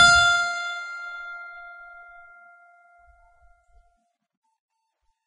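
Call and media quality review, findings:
Music hissy and grainy throughout, tones roughened, attacks smeared, nothing above 10.4 kHz. Likely Vorbis compression at heavy damage, fitting a very low bitrate near 18 kbps: treble residue quantised so coarsely that detail turns to noise.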